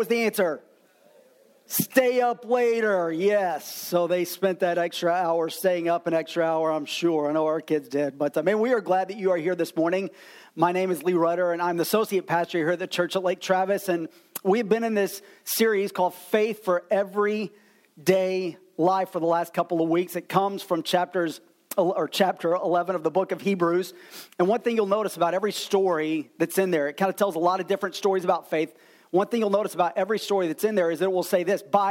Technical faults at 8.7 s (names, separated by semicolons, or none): none